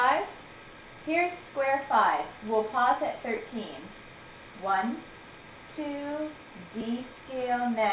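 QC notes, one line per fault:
No faults are present; the audio reaches the listener over a narrowband call path whose content stops at about 4 kHz, which fits a G.711 mu-law telephone codec.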